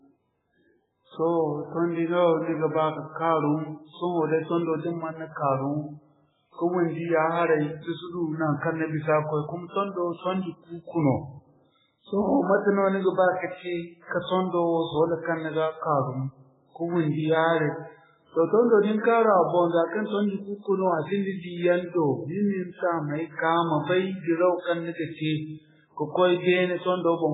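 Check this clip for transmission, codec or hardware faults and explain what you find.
Two faults are present: heavy codec damage across the whole speech clip, and a pre-echo at about 9.7 s.

Throughout, the audio carries the marks of heavy MP3 compression, likely at a very low bitrate in the region of 8 kbps. Starved of bits, the encoder discards everything above 3.8 kHz and zeroes weaker frequency lines that then flicker in and out between frames. This gives a watery, swirling quality, with sibilants turned into metallic chirps. On a spectrogram, energy stops at a hard horizontal ceiling near 3.8 kHz, with patchy, blocky holes below it.

From 9.68 to 9.73 s, a pre-echo smears about 56 ms of noise ahead of a sharp onset. The codec spreads quantisation noise evenly over its whole transform block, so noise sized for the loud attack also fills the quiet moment before it. You hear a brief hiss leading into a softened, blurred attack. 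The waveform shows low-level fuzz rising just before the transient, and the spectrogram shows a faint broadband smear preceding it.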